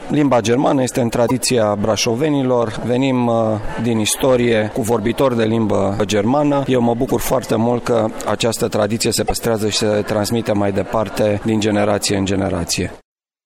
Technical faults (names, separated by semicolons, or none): damaged data in a compressed stream